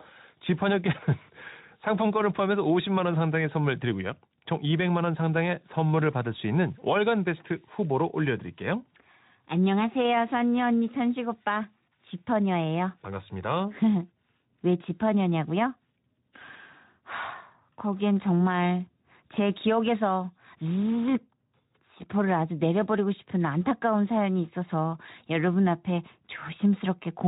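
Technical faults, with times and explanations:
No technical faults can be heard in this speech.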